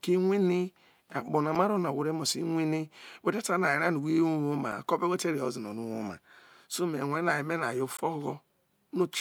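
Damaged data in a compressed stream occurs at 1.55 s, 4.72 s and from 7.97 to 8.00 s in this speech clip. Each time, a stretch of the encoded bitstream is corrupt, so the decoder misreads the affected frames, loses sync and hunts for the next valid frame header. Each fault is very brief, a sharp chirp or blip cutting across the speech, the last one longer at about 28 ms.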